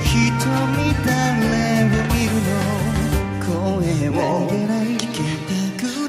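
No technical faults can be heard anywhere in the audio. Nothing in the sound points to a broken path or a failed stage in the chain that carried it.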